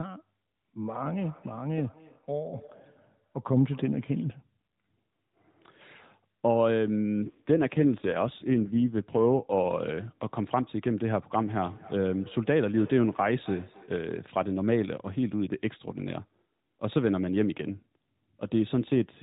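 Speech over what sounds like a narrowband AMR mobile call, nothing above 4 kHz. From 1.02 to 4.34 s there's feedback echo between two devices: another device in the room replays the audio into the mic, so it comes back roughly every third of a second, peaking about 26 dB under the voice. Then from 7.28 to 9.68 s you get an AMR rate drop, with the voice going rougher and more synthetic, which fits the codec stepping down from 12.2 to 5.9 kbps on a weak radio link.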